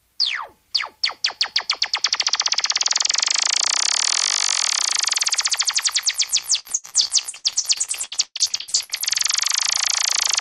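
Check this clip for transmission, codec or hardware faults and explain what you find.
One transmission fault. From 6.59 to 9.04 s the sound turns choppy and robotic: repeated packet loss leaves dozens of holes, up to 119 ms, patched by stretching earlier audio over 44% of the span.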